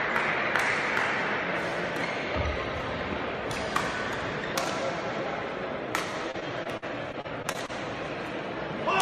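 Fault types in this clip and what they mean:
Repeated packet loss (robotic sound): Between 6.31 and 7.70 s the stream loses data over and over, and each hole is patched by stretching the sound just before it, the longest patch lasting 49 ms. About 15% of that stretch is filled-in material, giving a choppy, robotic texture with bits missing. Unlike a single dropout or steady distortion, the damage comes as a rapid chain of tiny gaps confined to one stretch.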